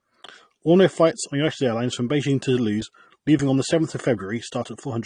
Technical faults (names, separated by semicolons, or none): low-bitrate audio saved at a high bitrate